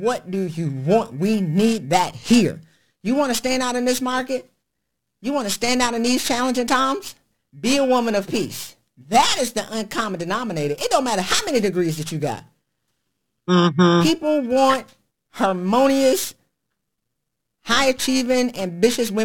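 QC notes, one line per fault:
throughout, periodic clock jitter: The converter clock wobbles at around 2 kHz. Sidebands at that spacing flank the speech, adding a rough metallic edge, strongest in the highs.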